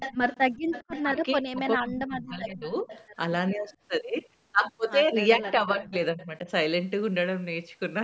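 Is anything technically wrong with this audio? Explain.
Yes. Two kinds of fault can be heard in this speech.

Echo leak appears at 0.0–1.03 s, 2.64–3.04 s, 3.71–3.76 s, 5.85–5.89 s and 6.21–6.25 s. The far end's echo canceller likely failed to remove what its loudspeaker fed into its microphone. A faint copy of the speech returns 407 ms late, between about 15 dB and about 35 dB below it.

Speech suppressed in double talk occurs at 1.03–2.89 s and 5.36–6.48 s, while both sides speak. The echo canceller likely mistook this talker for echo and turned everything down. The voice dips in patches, by about 30 dB and then about 15 dB, for roughly a second and a half and under a second.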